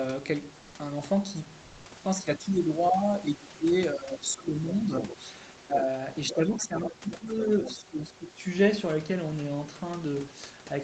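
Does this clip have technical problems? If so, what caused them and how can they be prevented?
Yes. There are three kinds of fault here.

Comfort noise in place of the background shows up from 1.61 to 1.85 s. For about 240 ms the real room background gives way to a flat, featureless hiss, only about 1 dB different in level. That likely comes from discontinuous transmission, fitting Opus DTX, during the pause. Turning DTX off, or using a better comfort-noise model, would keep the real background.

Speech suppressed in double talk hits from 2.21 to 5.24 s, again from 5.62 to 5.85 s, and from 6.32 to 8.45 s. The talker's voice dips by as much as around 20 dB in places while the far end is talking, likely because the echo canceller couldn't tell the near voice from the loudspeaker echo. A headset, or a canceller with better double-talk detection, prevents this.

The other side's voice leaking through happens from 6.28 to 7.72 s. 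A second, fainter voice comes through, roughly 15 dB below the main talker, which points to loudspeaker playback reaching the microphone that the echo canceller didn't fully remove. Lowering speaker volume, using a headset, or improving the echo canceller would stop it.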